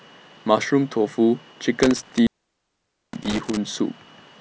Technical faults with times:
1.83-3.57 intermittent contact

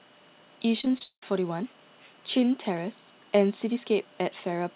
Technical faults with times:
0.81-1.23 repeated packet loss (robotic sound)

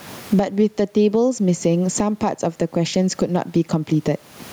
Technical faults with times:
0.00-4.53 gain pumping

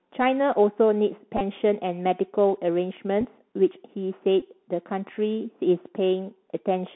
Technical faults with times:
0.00-6.96 Bluetooth CVSD headset codec
1.37-1.41 Bluetooth headset packet repeated
3.21-3.25 Bluetooth headset packet repeated
4.40 Bluetooth headset packet repeated

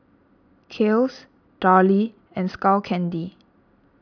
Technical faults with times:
none

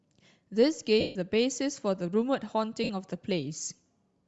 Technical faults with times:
0.00-4.28 Bluetooth LC3 compression
1.00-1.16 lost LE Audio frames
2.84-2.90 lost LE Audio frames

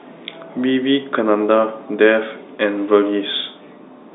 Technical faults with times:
none

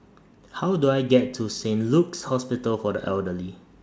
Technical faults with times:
none

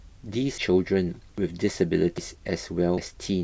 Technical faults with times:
1.38 audio missing between chunks
2.18 audio missing between chunks
2.98 audio missing between chunks

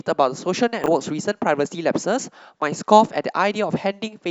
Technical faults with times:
0.84-0.88 chunks out of order

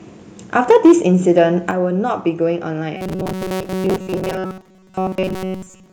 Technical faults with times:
0.70-0.92 microphone overload
0.71 microphone volume stepped down
1.30-1.42 microphone overload
1.71 microphone volume stepped down
2.97-5.92 robotic sound from repeated short buffers

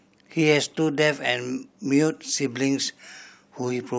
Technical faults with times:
none

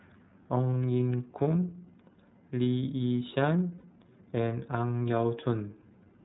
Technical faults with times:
0.00-6.24 iLBC codec
3.78-3.85 lost iLBC frames

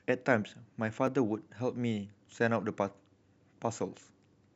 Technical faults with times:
1.07 block of digital silence

